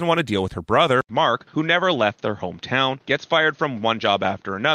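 At 1.01 s the speech drops out for 80 ms, then returns with nothing above 6.5 kHz, dull and boxy through to the end. The likely cause is an input switched to a poorer device mid-recording, with the system moving to a microphone or headset profile that passes a narrower band. Loudness stays about the same across the switch, but a new background noise floor appears, sitting roughly 40 dB below the speech.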